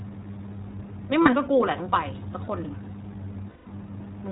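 Throughout the speech, the iLBC codec is plainly audible. Nothing above 4 kHz comes through, and the voice has a slightly rough, synthetic grain. Band-limiting alone would leave the sound dull but smooth. Here the roughness comes from each short frame's excitation being coded on its own, which fits iLBC's 20 ms frame mode at around 15.2 kbps.

At 1.22 s come the first lost iLBC frames, a 40 ms gap consistent with two missing 20 ms frames. The decoder fills it by repeating the last pitch cycle mixed with noise, so it sounds like a brief held, buzzy vowel, not a silent dropout or a click. The second loss runs from 3.50 to 3.67 s, about 160 ms, and there the held buzz fades over the longer gap. In both cases the voice is right again almost at once, since iLBC frames stand alone.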